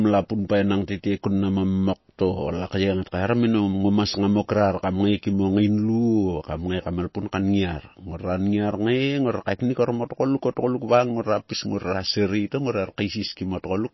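Likely MP3 compression, throughout the clip: starved of bits, the encoder removes everything above 5.8 kHz and drops weak detail, leaving plainly watery speech that fits about 24 kbps.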